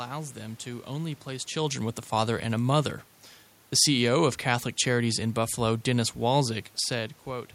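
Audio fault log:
Nothing's amiss on the system side here; there's some room noise under the speech, and the talker shifts toward or away from the mic once early on and again right near the end.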